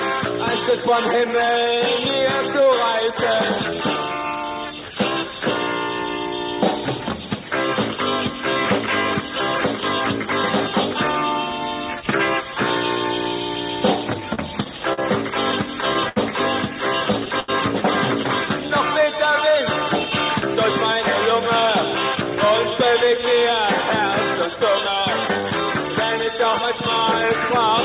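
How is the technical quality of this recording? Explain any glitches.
The recording has several timing glitches in its second half, all from an unsteady jitter buffer. The audio is band-limited to 4 kHz, which fits a G.711 A-law call path at 64 kbps.

Repeated stalls (stutter), 14.2 to 16.18 s: packets kept arriving late, so the buffer ran dry nine times. Each time the receiver extended the last sound, adding about 201 ms in total with the longest hold at 73 ms. Nothing is lost, but the audio drags and stutters.

Short stall from a late packet, 17.40 to 17.50 s: one packet missed its slot and the buffer emptied. The receiver stretched the preceding sound for 83 ms until the packet arrived and then resumed. That sound is held too long, with a faint buzz or dip.

Jitter buffer slow-down, 18.61 to 19.52 s: to rebuild its reserve, the receiver repeated individual pitch periods and fragments of pauses, adding 56 ms. 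Playback runs at about 95% speed with unchanged pitch, so sounds are drawn out and may warble slightly.

Jitter buffer speed-up, 22.15 to 24.62 s and 25.89 to 27.50 s: the buffer held surplus audio, so the receiver trimmed short pitch-period pieces to cut the delay. It removed about a tenth of a second in the first stretch (105% speed) and about 50 ms in the second (103%). The audio runs faster at the same pitch, and the first stretch sounds hurried.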